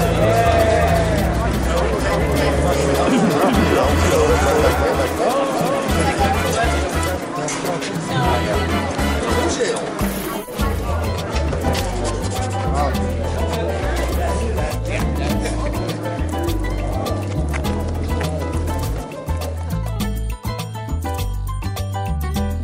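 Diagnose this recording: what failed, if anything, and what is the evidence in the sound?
Likely a slower second capture path or an out-of-step edit: a doubled audio track, with an equally loud copy trailing about 0.4 s behind from the start until it cuts off abruptly at 6.26 s.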